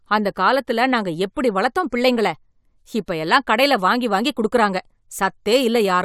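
No technical faults heard.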